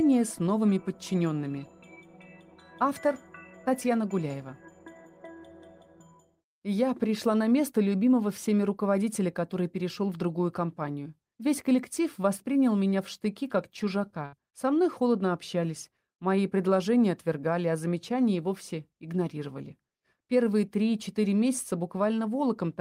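At 14.25 to 14.34 s, a burst of packet loss: the last sound is stretched and fades for about 70 ms rather than dropping to silence, then resumes with 80 ms missing.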